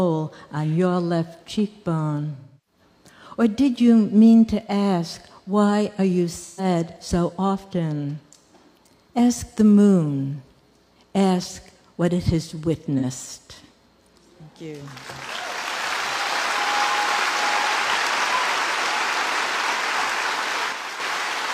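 AAC frame loss with concealment occurs at 2.36 to 2.81 s, 6.43 to 6.64 s, and 12.98 to 13.04 s, spanning about 0.3 s, 0.13 s, and 0.04 s, consistent with seven, three, and one lost frames. The decoder rebuilt each gap from the last good spectrum, so the gaps sound like brief smeared, noisy, phasey patches rather than silences.

A channel drops out from 20.72 to 21.0 s. The level falls abruptly by about 6 dB and then recovers. This is the likely result of one stereo channel going missing before the mono sum, halving the material shared by both channels.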